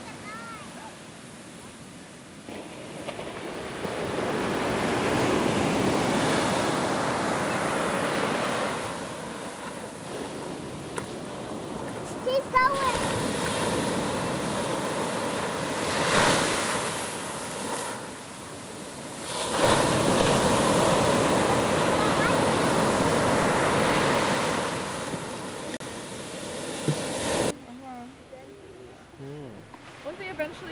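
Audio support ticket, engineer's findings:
Resampler restarted on every block, throughout the clip. Symptom: steady ticking at 20 Hz, i.e. one tick every 50 ms, present only while signal is playing, absent in gaps. Probable component: sample-rate converter, consistent with a 24 kHz to 48 kHz upsample. Mechanism: each 50 ms block converted in isolation; filter state reset at every boundary, so edge samples computed against silence or wrapped data instead of true neighbours, leaving a small discontinuity per block.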